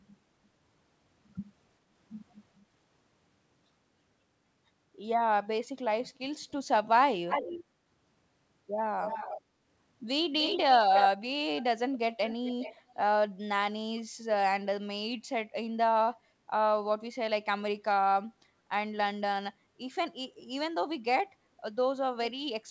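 Echo leak at 7.28, 9.02, 10.38, 10.95, 11.59, 11.93 and 12.25 s: a delayed copy trails the speech by 292 ms, then 374 ms from 11.59 s. It is likely from a loudspeaker echo the canceller missed. On a spectrogram it shows as repeated harmonic traces offset in time, ranging from about 25 dB below the speech up to equal level.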